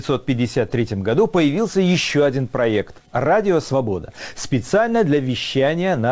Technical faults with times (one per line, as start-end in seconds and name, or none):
none